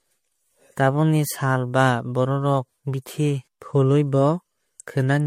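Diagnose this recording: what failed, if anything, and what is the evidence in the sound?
Generation loss throughout, codec stage: smeared, hollow sound, no content above 16.5 kHz, likely from about four MP3 passes, each requantising on a shifted frame grid.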